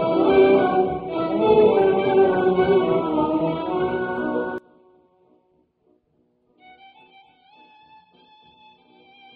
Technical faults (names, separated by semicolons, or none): one channel inverted